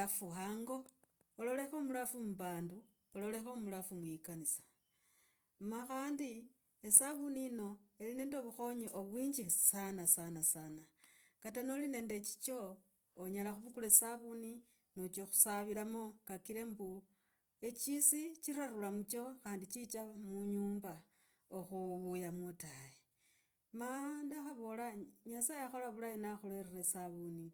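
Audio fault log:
throughout, Opus compression. The speech has a rough, grainy texture, with a noisy layer that is plainly audible. Few spectral holes appear, so there is little swirling. Content reaches up to 20.2 kHz, so the bandwidth is not narrowed. The likely cause is Opus in its music (CELT) mode at a low rate, which fits 24 kbps. Short of bits, the encoder keeps each band's energy but fills in detail with folded or noise content.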